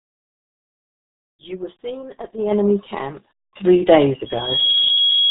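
RealAudio 14.4 codec damage runs through the whole speech clip. Nothing above about 3.9 kHz survives, so the voice is muffled and gargly, with the smeared, bubbling texture of very heavy low-rate coding that fits an 8 kbit/s dial-up-era speech codec. At that rate the encoder keeps only a coarse model of the voice and discards the upper band entirely. A loudspeaker feedback squeal starts at 4.26 s and lasts to the end. A single tone at 3.3 kHz swells over roughly 0.4 s and settles a few decibels above the speech. The cause is a microphone picking up the loudspeaker it feeds. At 3.3 kHz the loop gain exceeded one, so that frequency kept reinforcing itself on each pass around the loop.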